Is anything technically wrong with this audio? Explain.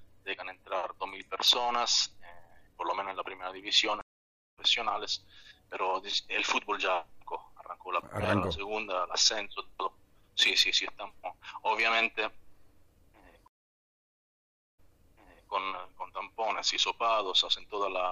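Yes. There are two stream reconnects. From 4.01 to 4.58 s the sound goes silent for 0.53 s and resumes roughly 0.3 s later in the material. From 13.48 to 15.51 s a 1.28 s silence ends with the audio jumping back 0.76 s and replaying material already heard. Each time the connection dropped and a fresh decoder restarted mid-stream. Unlike a plain dropout, the timeline shifts, skipping or repeating material, rather than simply leaving a hole.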